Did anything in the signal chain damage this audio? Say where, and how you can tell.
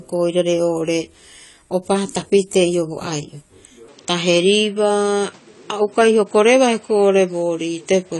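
Yes. At the codec stage, likely AAC compression: throughout, nothing sounds above 11.5 kHz and the speech smears and warbles, which fits roughly 32 kbps AAC-LC.

At the input stage, likely an input switched to a poorer device: from 3.88 s the band narrows to 8.7 kHz, with no gap or level change and new noise about 35 dB down.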